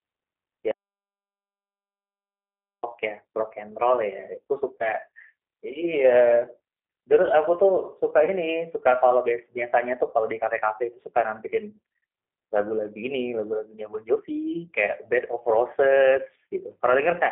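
Speech carried over a narrowband line, with codec damage that is plainly audible throughout. It has the sound of a G.729 codec, specifically its G.729A form, and the roughness fits an 8 kbit/s stream. Speech is rebuilt from a filter model, a pitch predictor and a few pulses per frame rather than sent as a waveform, so it comes out grainy and slightly synthetic. The line passes only 250 Hz to 3.4 kHz, and a spectrogram shows an empty band above 3.4 kHz and a thin floor below 250 Hz for the whole clip. From 0.71 to 2.83 s there is an audio dropout to silence lasting about 2.1 s. The sound cuts off mid-flow and returns abruptly, with no room tone in between. The waveform is a dead flat line there, and the spectrogram is a completely blank block. That points to lost input, likely a dropped link or a device that briefly stopped delivering, while silence kept being written. Twice, at 4.78 to 4.93 s and at 8.25 to 8.30 s, there is VoIP packet loss concealed by the speech codec. 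Each gap is 20 ms, which fits a single lost packet. The decoder fills the hole by extending its last pitch and filter state with falling gain. This gives a short smeared stretch, and the damage lingers beyond the 20 ms itself; the first event spans about 150 ms. On a spectrogram the harmonics smear flat and fade. The waveform shows a repetitive, decaying envelope rather than a gap.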